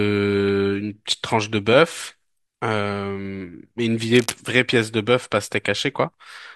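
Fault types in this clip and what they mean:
Cable scratch noise: a patch of dense, ragged crackle from 4.13 to 4.34 s, about 10 dB below the speech, likely from a worn lead or connector being moved. Unlike a single click, it is a rapid, irregular cluster of bursts, and the speech continues through it.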